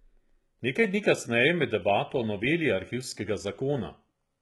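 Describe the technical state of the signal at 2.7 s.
At 2.7 s the speech carries heavy artefacts of what is likely HE-AAC compression, present throughout the clip. The treble is rebuilt by copying lower bands upward, so s sounds turn gritty and lispy, with nothing above 11.8 kHz, consistent with a very low bitrate near 16 kbps.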